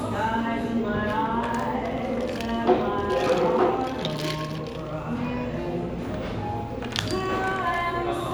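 Listening to this recording of sounds, nothing stood out as a technical problem.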